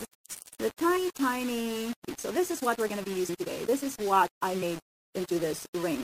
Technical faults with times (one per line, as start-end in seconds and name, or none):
0.00-6.04 low bit depth without dither
1.87-6.04 time-stretched section
2.08 compressed frames skipped
3.28 compressed frames skipped
4.61 compressed frames skipped